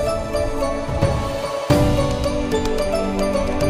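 No technical faults can be heard anywhere in the audio. Nothing in the sound points to a problem in how it was captured, processed or played back.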